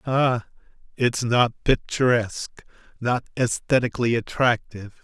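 Just a bit of recorded speech, and there's nothing technically wrong to flag anywhere in it.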